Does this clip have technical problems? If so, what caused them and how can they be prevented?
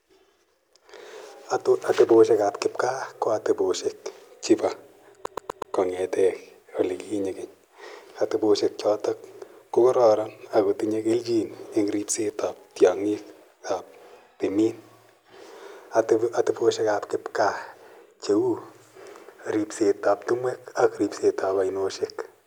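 Yes. From 5.26 to 5.75 s the speech is caught in a CD stuck on one turn: a 122 ms slice plays four times in a row, each pass cut by a brief mute as the laser jumps back a track at a scratch. The exact, even repetition of the same short slice sets it apart from a buffer or network glitch, which sounds irregular. Clean or replace the disc, or rip it with error-correcting software, to prevent it.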